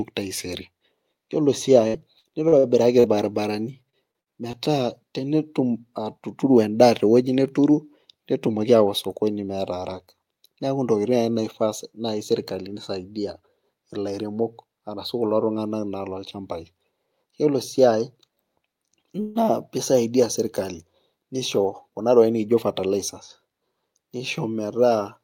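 Repeated packet loss (robotic sound) runs from 1.87 to 4.56 s. Ten holes are patched by stretching the preceding sound, about 15% of the span, with the longest gap 62 ms, giving choppy speech with pieces missing.

Jitter buffer speed-up follows at 4.68 to 6.69 s, with speech running at 105% and about a tenth of a second trimmed out in pitch-period slices. It recurs briefly at 8.50 to 8.75 s, at 111% with roughly 40 ms removed. Pitch holds while the pace hurries.

Call audio freeze appears at 19.21 to 19.38 s. A 146 ms fading buzz or hiss fills the gap before speech resumes where it stopped, with nothing lost, likely because delayed packets drained the buffer.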